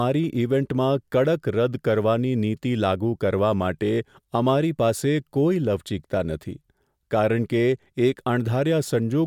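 Nothing stood out as a technical fault on listening to this speech recording.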